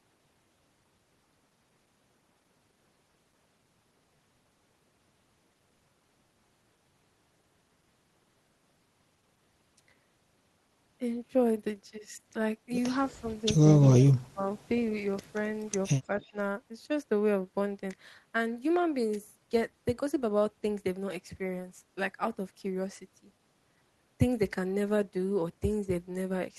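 Around 13.07 to 13.45 s the speech dips slightly, only a few dB, then from 13.84 to 14.49 s it sinks hard, down by around 30 dB. That's speech suppressed in double talk: the far side was likely speaking at the same moment, and the echo canceller, unable to tell this talker from its own loudspeaker echo, pulled everything down. A smaller dip of roughly 10 dB follows at 16.14 to 16.34 s.

Right inside that last dip, from 16.2 to 16.31 s, there's a faint echo leak: a brief, very quiet copy of the voice, about 35 dB below the speech and arriving 290 ms late. The likely cause is a loudspeaker on one side whose echo canceller didn't fully clean what its microphone picked up, so a scrap of the sound came back down the line.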